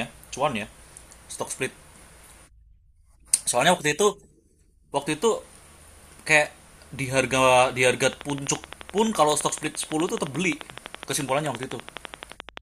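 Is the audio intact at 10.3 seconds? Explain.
No. A train of clicks runs from 8.04 to 12.58 s, about 12 regular pulses per second, roughly fifty in all, peaking well above the speech. Near-identical repeating impulses like these most likely come from electrical interference or a faulty connection or power supply, heard as steady ticking over speech and pauses.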